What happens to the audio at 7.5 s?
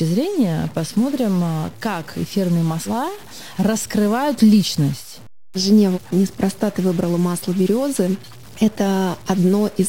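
At 7.5 s the speech carries harsh, buzzy distortion, present throughout the clip. The likely cause is a stuck bit, adding errors of roughly -35 dBFS.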